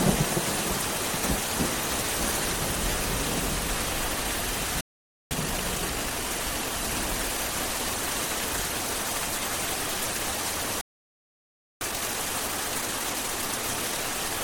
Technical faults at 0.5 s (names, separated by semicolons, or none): none